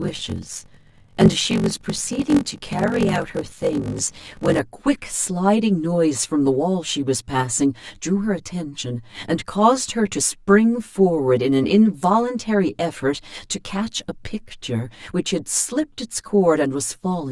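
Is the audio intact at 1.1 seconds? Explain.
No. A block size mismatch with zero padding runs from 0.0 to 4.6 s. Short blocks are padded out to a larger read, which fits 512 samples. This adds a 46.9 Hz buzz and slows the sound to 0.861 of normal speed, at about its normal pitch. Channel delay comb filtering is also present. One channel lags by about 10 ms before the mono sum. This cuts regular notches starting near 50 Hz, so the sound is hollow and phasey.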